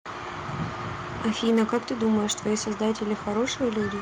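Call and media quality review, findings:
Harsh, crackling edge on loudest syllables, 1.25 to 2.54 s; peaks flattened, driving about 6 dB past the converter's limit, a few percent of samples clipped. Microphone overload, likely input gain set too high at the converter.

Sudden level drop at 1.49 s, voice and background together, about 3 dB down, arriving mid-distortion. Microphone volume stepped down, likely call software reacting to clipping and cutting device input gain in one step.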